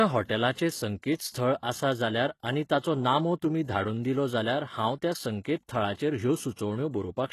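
It's a speech clip with plainly audible HE-AAC compression throughout: gritty, metallic treble rebuilt by band replication, nothing above 12.3 kHz, likely from a low bitrate around 16 kbps.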